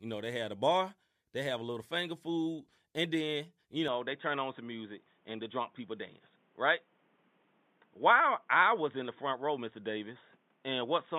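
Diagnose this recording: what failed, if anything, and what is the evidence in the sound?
At 3.88 s the speech abruptly loses its top end and stays dull to the end. Nothing remains above 3.8 kHz. The switch is instant, with no silence. Level barely changes. A new noise floor appears, roughly 40 dB below the speech. The stage is the driver or device layer. The likely cause is an input switched to a poorer device, such as a headset's narrowband call profile. It brings its own bandwidth limit and background noise.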